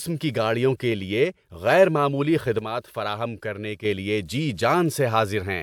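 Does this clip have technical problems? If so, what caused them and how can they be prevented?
Yes. Just after "کے لیے غیر معمولی", from 2.59 to 3.85 s, the level falls abruptly by about 6 dB until "لیے جی". The likely cause is one channel drops out: one stereo side goes missing, so the mono sum keeps only half the shared signal. Checking both channels' cables and connectors before recording prevents it.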